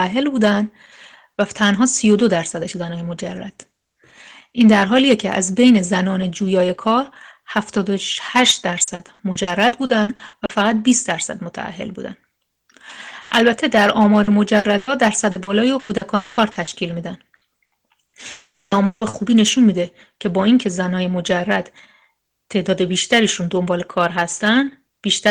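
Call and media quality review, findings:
Hard clipping, whole clip: crackle and harsh edge on loud peaks. Input level or gain stage overdriven by about 9 dB, so roughly 0.5% of samples were cut flat. Waveform: flat-topped peaks. Spectrogram: broadband vertical smears of added harmonics reaching the top band at each peak.

Repeated packet loss (robotic sound), 8.83–10.51 s, 14.23–16.69 s, 17.35–19.15 s: choppy, metallic stretches. Network jitter/loss with the decoder looping the last sound into each hole. First span has 11 gaps, 480 ms concealed, about 29% of the span. Second has 9 gaps, 480 ms. Third has 5 gaps, 380 ms, longest 160 ms. Part of this was patched from redundancy. Spectrogram: repeated frozen, smeared frame blocks with abrupt seams. Waveform: periodic envelope repeats.

Burst of packet loss, 13.21–13.34 s: 100 ms of held, decaying fill, then sound resumes with content skipped. 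Cause is several consecutive packets lost or late, concealed by extrapolation. Spectrogram: horizontal frozen harmonic stripes fading out, no silent gap. Waveform: smooth decaying repetition, then a jump.

Lost packet rebuilt from error correction, 13.31 s: a brief rough, noisier frame inside the burst, with no gap. The Opus in-band FEC copy decoded at low bitrate replaces the lost packet. Spectrogram: one 20 ms slice with grainier texture. Waveform: continuous, no dropout visible.

Long network dropout, 16.15–16.40 s and 18.31–18.74 s: extended stalls, likely from a connection interruption upstream of the receiver. The first is a 220 ms fading fill with no silence. The second is a 400 ms concealment whose fill fades and ends in 250 ms of silence. Spectrogram: a frozen band fading into an empty or dark region. Waveform: a decaying tail, then flat line, then audio restarting mid-content.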